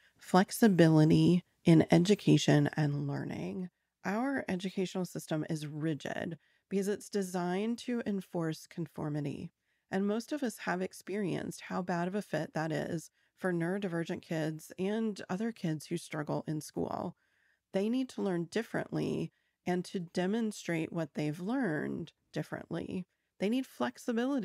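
From 2.46 to 3.31 s, zipper noise rides on the speech as the level drops by roughly 10 dB in coarse, unsmoothed steps, around thirty a second. Each jump clicks, giving a rapid ticking that a smooth fader move would not.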